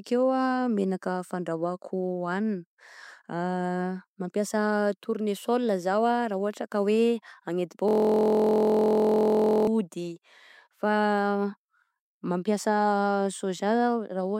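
A system hang loop hits this speech clip from 7.88 to 9.67 s: the machine froze while the audio hardware kept replaying one 23.22 ms slice, which fits a 1024-sample buffer. That slice repeats dozens of times, producing a steady 43.1 Hz buzz.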